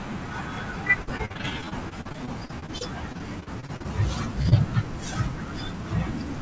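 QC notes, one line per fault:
1.02 to 3.86 s, repeated packet loss (robotic sound). The audio breaks up into roughly thirty short holes across this stretch, none longer than 51 ms. Each hole is patched by extending the sound just before it, so about 0.64 s is filler, around a fifth of the span. About 0.5 s of real audio is lost outright. The repeated copying gives a choppy, robotic texture with pieces missing.
4.42 to 4.47 s, short stall from a late packet. The incoming audio arrived 29 ms behind schedule and the jitter buffer ran dry. The receiver held the last sound for 29 ms until the data turned up, then carried on from the same point. Nothing is lost. A sound is simply held a fraction too long, with a slight buzz or dip. The band stops at 8 kHz, which fits a G.722 call path.
4.49 to 4.53 s, short concealed packet loss. About 20 ms of audio never reached the decoder in time. The receiver covered the gap with 22 ms of sound continued from just before it, then blended back into the real signal. 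The result is a brief smear or wobble. It follows closely on the stall.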